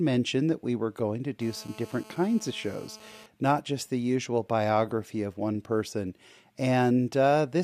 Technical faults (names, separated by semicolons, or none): GSM phone buzz